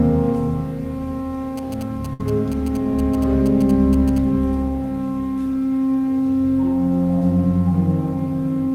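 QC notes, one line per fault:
1.58–4.18 s, GSM signalling bursts: a nearby 2G phone's radio bursts are rectified by the audio circuit, giving a galloping dit-dit-dit of short 217 Hz buzzes around 20 dB below the sound.
2.13–2.21 s, burst of packet loss: about 60 ms of audio failed to arrive; the receiver stretched and faded the last sound to fill the gap, then resumed with about 60 ms skipped.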